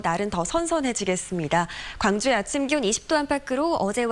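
From 2.68 s to the end, the sound jumps faster and higher. This is a wrong sample rate fault. Samples are played back too fast with no conversion. Speed rises about 1.09 times and pitch about 1.5 semitones, which fits 22 kHz material played at 24 kHz.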